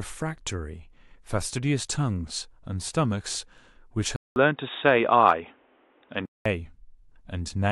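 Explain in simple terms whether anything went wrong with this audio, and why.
The recording likely had its input switched to a poorer device from 4.16 to 6.46 s. After a 0.2 s silence, the speech turns dull and boxy, with nothing above 3.8 kHz, a change in loudness and faint new background noise, until the original microphone returns.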